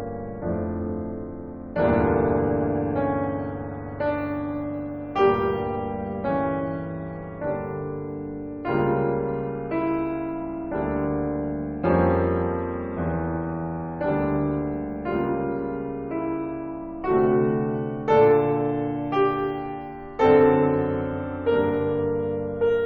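No technical faults are audible anywhere in the music.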